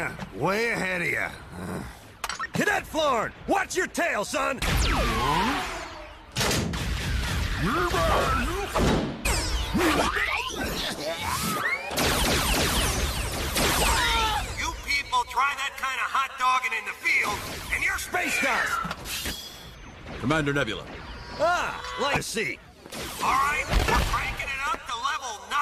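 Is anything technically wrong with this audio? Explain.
Yes. Damaged data in a compressed stream causes brief glitches at 1.51 s, 5.83 to 5.85 s, 9.24 s and 22.15 s. Corrupted bytes make the decoder misread frames and lose sync.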